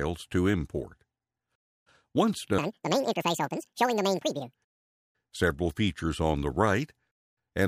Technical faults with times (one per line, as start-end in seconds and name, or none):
2.58-4.55 audio read two samples at a time (double speed)